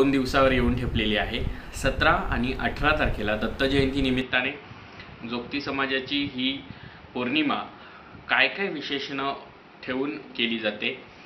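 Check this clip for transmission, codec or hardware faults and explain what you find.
One fault is present. From 4.21 s, the input likely switched to a poorer device. Nothing passes above 5.8 kHz, so the sound turns dull, slightly quieter and noisier.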